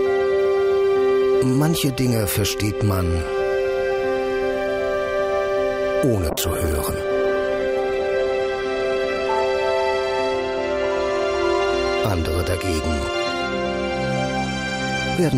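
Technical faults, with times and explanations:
6.31–9.51 s, call bitrate drop: sound turns coarse and muffled, consistent with roughly 96 falling to 17 kbps; continuous smearing without dropouts, unlike packet loss.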